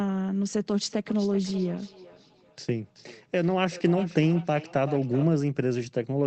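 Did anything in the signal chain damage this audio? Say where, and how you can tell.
Yes. Feedback echo between two devices, 0.82 to 5.29 s. The speech recurs roughly every 0.4 s, peaking about 15 dB down, as a second device replays it into this microphone, outside its echo canceller's reach.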